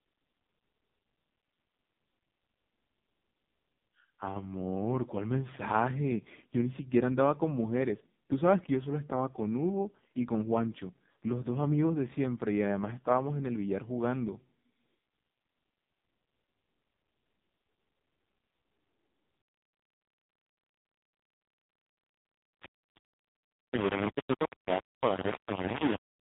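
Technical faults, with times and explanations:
Throughout: AMR narrowband mobile codec. The speech has passed through AMR-NB at a low mode, consistent with 5.15 kbps, and the damage is heavy. Nothing survives above 3.8 kHz, and the sparse pulse excitation of the vocal-tract model leaves voiced sounds buzzy and synthetic, with a robotic edge.
19.40 to 26.24 s: low bit depth without dither. From here to the end, the audio sounds like it was rounded to about 3 bits, which is the likely cause. The quantisation error follows the signal, producing heavy grainy distortion roughly as loud as the speech itself.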